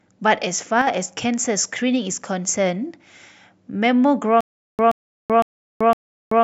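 At 0.82 to 0.87 s, one channel drops out, likely a brief loss of one stereo side: the summed speech dips abruptly by about 6 dB, then recovers.

From 4.41 s to the end, a stutter with silent gaps: the stream likely stalled and replayed its last 126 ms fragment four times, each followed by 382 ms of digital silence, repeating every 508 ms.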